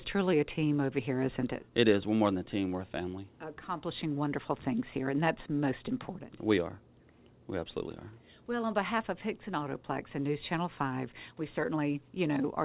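No faults can be heard; the signal carries the narrow bandwidth and light coding grain of a telephone-grade call path, with nothing above 4 kHz, which fits G.711 mu-law at 64 kbps.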